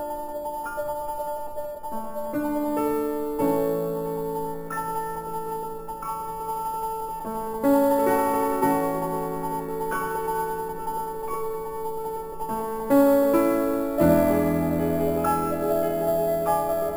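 Throughout the clip, the rate was raised from 12 kHz to 44.1 kHz by simply repeating samples with no smoothing filter, causing imaging from sample-and-hold upsampling: mirrored spectral copies, the lowest filling 6 to 12 kHz at about 21 dB below the signal, add a bright metallic fizz that tracks the sound's level and moves against its pitch.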